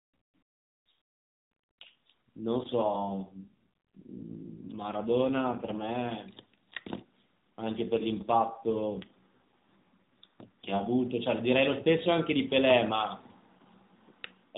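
Speech heard through a narrowband mobile codec (AMR-NB) that passes nothing above 4 kHz. It suffers two AMR rate drops, from 2.58 to 6.13 s and from 7.62 to 10.99 s, where the voice turns buzzier and more synthetic. That fits the codec being pushed from 12.2 down to about 5.9 kbps on a weak link. Unlike packet loss, there are no gaps, and unlike a bandwidth switch, the band stays the same. Only the roughness changes.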